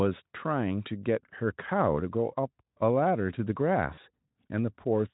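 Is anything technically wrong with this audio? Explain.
Yes. VoIP packet loss concealed by the speech codec appears at 3.93 to 3.99 s. About 40 ms of audio went missing, which fits two lost 20 ms frames. The Speex decoder filled the gap by projecting its last pitch and spectral envelope forward while lowering the gain. That stretched the speech into a short buzzy tone or coloured noise that fades. Because each frame builds on the one before it, the voice stays weak or distorted for tens of milliseconds or more after the gap.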